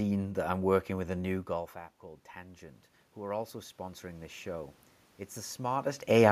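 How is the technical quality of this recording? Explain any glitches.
There's one real glitch, and it comes right after the talker drifts away from the mic. From 1.49 to 4.42 s, just after "working with a new", you get automatic gain rising. The input level drops by about 16 dB, so the AGC slowly cranks its gain back up by about 9 dB. Over those three seconds the voice and the room noise swell up together, which sounds like a gradual fade-in rather than a jump.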